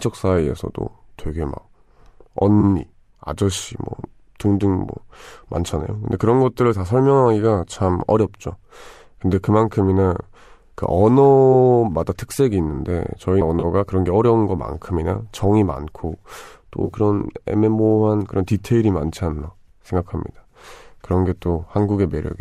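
Three short smeared, noisy or phasey patches break up the speech, at 2.61 to 2.64 s, 13.60 to 13.65 s and 16.85 to 16.93 s. These are AAC frame loss with concealment. About 20 ms, 30 ms and 50 ms of audio went missing, which fits runs of roughly 10 ms frames. The last loss is scattered across 80 ms, with no gap longer than around 20 ms. Each time, the decoder patched the hole from the last good spectrum, with scrambled signs or interpolated energy. That filler is what you hear in place of the real signal. The surrounding sound is carried by what is likely low-delay AAC (AAC-ELD) compression, which leaves only light codec texture of its own.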